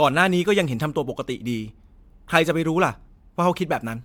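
All the way through, the speech has a swirly, hollow quality, with consonant attacks smeared and nothing above about 19.9 kHz. That's generation loss, likely from repeated MP3 encoding, around seven passes at what sounds like 128 kbit/s, each adding fresh quantisation damage.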